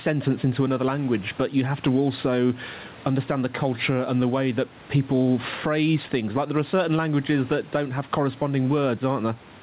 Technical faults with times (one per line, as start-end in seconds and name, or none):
0.00-9.62 gain pumping